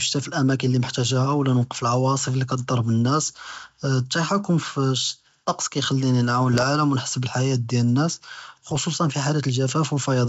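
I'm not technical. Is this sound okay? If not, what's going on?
No. Bit errors on an ADPCM link cause two short rough bursts with pops, at 6.54 to 6.63 s, just before "ונ’חס בלח’יה", and at 8.69 to 8.78 s. A few scrambled bits throw off the decoder's running guess of the sound, so the disturbance lingers briefly.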